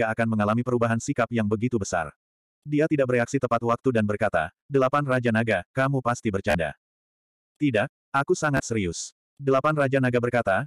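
At 6.50 s the audio catches in a Bluetooth stutter for about 40 ms. Data stopped arriving, so the receiver replayed its last short slice until the stream caught up. That gives a brief machine-gun buzz, which fits roughly three lost packets. The sound then picks up further on, as if it had kept playing. At 8.57 s it happens again, for about 27 ms. This shorter buzz fits two lost packets.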